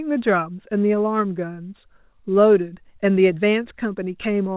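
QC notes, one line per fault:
No faults heard.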